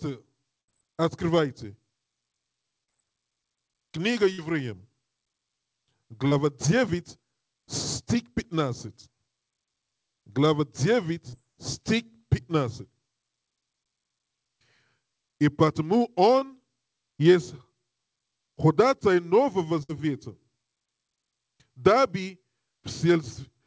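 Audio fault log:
0.61, 4.33 and 19.83 s: burst of packet loss. Roughly 70, 50 and 60 ms of audio never arrived in time, so the receiver stretched out the last bit of sound and faded it, giving a brief held buzz or fading hiss before the sound picks up further along with that stretch gone.
2.84, 6.28, 11.29 and 16.39 s: short concealed packet loss. Gaps of about 40, 30, 30 and 20 ms were patched by continuing the preceding sound and blending back in, so each comes across as a quick smear or wobble, and a short sound can drop out. All of this rides on a G.722 call path that cuts everything above 8 kHz.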